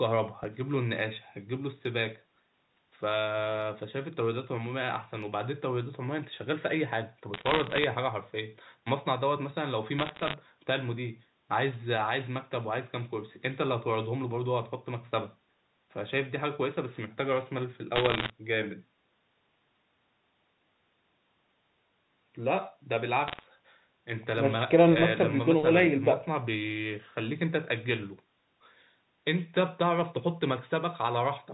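Speech heard over a narrowband phone channel, cut off at 4 kHz, with bursts of bit errors on a digital phone line. Sharp ticks and crackle sit over the speech at 7.34 to 7.84 s, 9.99 to 10.34 s, 17.96 to 18.30 s and 23.28 to 23.44 s. Each flipped bit changes one sample. Hits on the sign or high bits jump hardest. The rate sounds around one percent or less.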